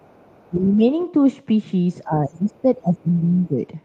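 Other side's voice leaking through is audible in this speech recording from 0.00 to 0.49 s and again from 0.99 to 1.06 s as a faint second voice, about 35 dB and then about 30 dB below the talker, likely loudspeaker playback that the echo canceller left in the microphone signal. Speech suppressed in double talk follows from 0.50 to 0.83 s, where the talker dips by around 10 dB, and from 2.04 to 3.61 s, where the level falls by as much as about 15 dB for roughly a second and a half, likely the canceller turning everything down while both sides spoke together.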